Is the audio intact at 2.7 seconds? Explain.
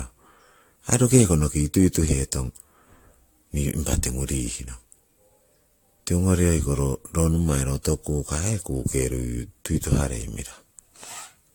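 No. At 2.7 seconds, as throughout the clip, there is generation loss: the speech was likely decoded and re-encoded with AAC about seven times, each pass requantising on a shifted frame grid. The accumulated noise and spectral holes make it swirly, smeared and hollow, with blurred consonant attacks, and nothing is present above 19.2 kHz.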